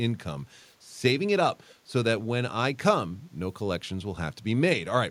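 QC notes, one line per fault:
1.68–1.74 s, echo leak: a faint, brief copy of the speech returns about 240 ms late, far below the direct speech, likely from a loudspeaker echo canceller letting residue through.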